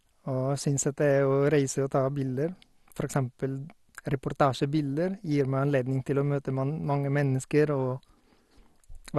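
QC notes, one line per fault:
Throughout: MP2 compression, likely the cause of the dull, gurgling, granular character of this speech. Nothing survives above about 12.2 kHz. Starved sub-bands drop out and flicker back, while the remaining bands are coarsely quantised. That fits a low bitrate near 64 kbps.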